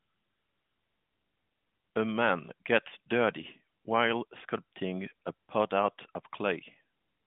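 No technical faults are present.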